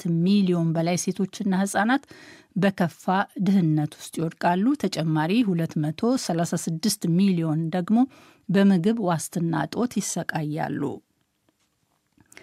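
Speech recording; no technical problems can be heard.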